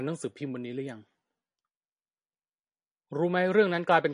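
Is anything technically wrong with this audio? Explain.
Yes. Throughout the speech, the most likely cause is MP3 compression at a low bitrate, which fits something around 40 kbps. Starved of bits, the encoder has cut the treble at a fixed point, so nothing is present above about 10.6 kHz, and it has dropped weaker frequency components that then flicker in and out between frames. The result is a dulled top end and plainly audible codec damage, a watery, swirling texture running through the whole clip.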